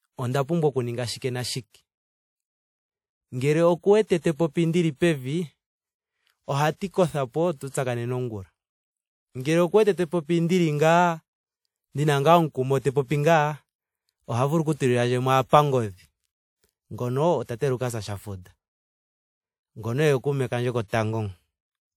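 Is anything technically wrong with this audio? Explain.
Yes. The speech has pre-echo four times: 1.18 to 1.22 s, 6.76 to 6.81 s just before "kothapo tu tsakanene ongula", 9.42 to 9.45 s just before "oku wete te popi", and 20.88 to 20.93 s just after "oye kuume kandje". Each lasts 33 to 52 ms. A transform codec spread noise sized for a sharp onset across its whole block, so a short hiss leads each attack and blurs it. Unlike reverb or echo, the smear comes before the onset, not after.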